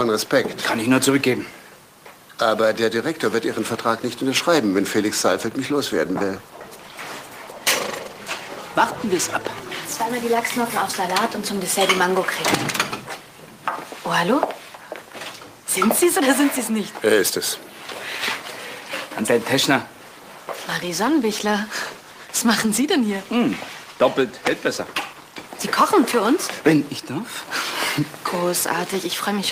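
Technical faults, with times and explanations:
4.74–10.73 s and 20.82–26.05 s: call bitrate drop. Coarser coding makes the sound rough and duller, fitting a fall from 32 to 18 kbps. There are no gaps, unlike packet loss.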